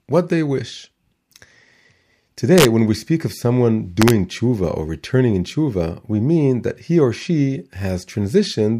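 From 2.58 to 2.65 s, just before "when we speak of", and again from 4.02 to 4.10 s, between "we speak of someone" and "tshuva or returning in", integer overflow wraps speech peaks, pushed about 2 dB and about 1 dB over the limit, to the opposite sign. It sounds like harsh cracks. The waveform shows peaks flipping across the full range, and the spectrogram shows broadband vertical streaks.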